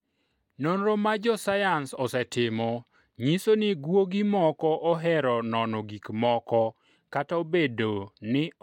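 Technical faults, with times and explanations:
No technical faults can be heard in this speech recording. There is nothing here that calls for a time or an explanation.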